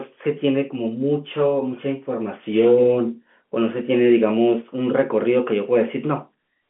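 No technical faults are audible.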